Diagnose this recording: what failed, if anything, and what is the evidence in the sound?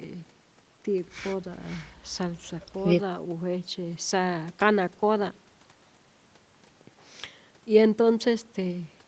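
Nothing has failed: the speech shows only the ordinary marks of a call chain, with the lowest bass removed by the call microphone processing and no content above 8 kHz, a band limit consistent with an Opus codec on the WebRTC call path, and no stage from wiring through to playback leaves any sign of a fault.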